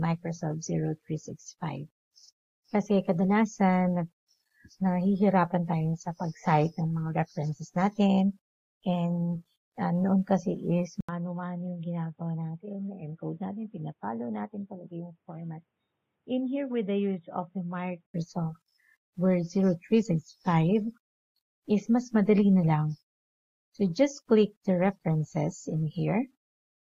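At 11.0 s the sound drops out for about 80 ms, then returns dull and boxy, with nothing above 3.8 kHz, a level a few dB lower and a faint new background noise. This is most likely the input switched to a poorer device, with full clarity returning at 18.1 s. A plain low-pass filter or codec bandwidth drop would narrow the band without the brief gap, the change in level and the new noise floor that come with a different device.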